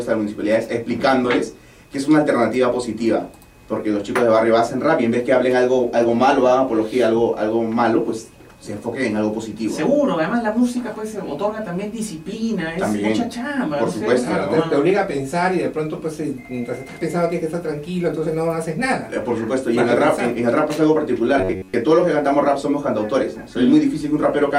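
From 21.38 to 21.74 s, robotic sound from repeated short buffers appears. The sound becomes a rigid, metallic buzz near 93.8 Hz. Likely, a roughly 11 ms buffer repeated while most of the new audio was skipped.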